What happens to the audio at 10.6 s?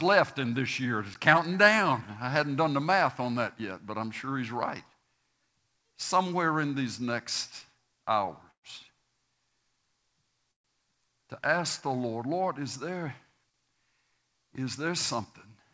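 At 10.6 s there is a call audio freeze, running from about 10.52 to 10.66 s. The sound stalls: a brief smeared continuation of the last sound fades almost at once into near-silence lasting about 0.12 s. The likely cause is packets held up in transit, draining the jitter buffer. When the audio resumes, it picks up exactly where it stopped. Nothing is lost, but everything after is pushed about 0.13 s later. On a waveform this appears as a near-flat gap. A spectrogram shows a short blurred tail and then an empty vertical strip, with energy stopping at the call path's 8 kHz ceiling on either side.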